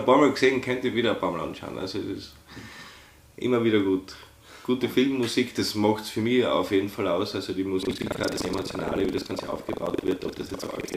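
From 7.81 s to the end, a robotic 23.4 Hz buzz rattles through the sound: buffer tearing, where most of each buffer (fitting 2048 samples) replays audio from a lap earlier.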